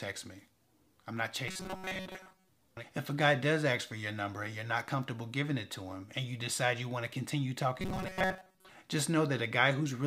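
Robotic sound from repeated short buffers affects the audio from 1.48 to 2.49 s and again from 7.80 to 8.71 s. Both stretches collapse into a rigid metallic buzz at 188 Hz, which fits a buffer of roughly 5.3 ms being replayed most of the time, likely because fresh audio is arriving too seldom. The steady tone and the lack of silent gaps set this apart from ordinary dropouts.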